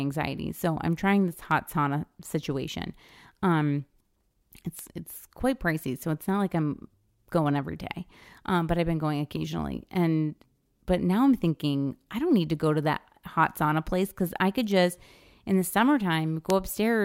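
Speech with four bit error spikes, single sharp ticks at 1.51, 4.79, 14.71 and 16.50 s, peaking at about -25, -13, -19 and -7 dBFS. Each is a flipped bit jumping one or a few samples by a power of two, seen as a lone needle on the waveform and a thin full-height vertical line on a spectrogram.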